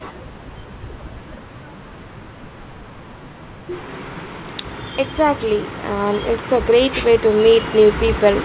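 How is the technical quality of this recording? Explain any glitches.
No glitches: the speech comes through a call path whose telephone-band sound, with nothing above 4 kHz, points to G.711 mu-law, and it holds steady with no dropouts or other disturbances.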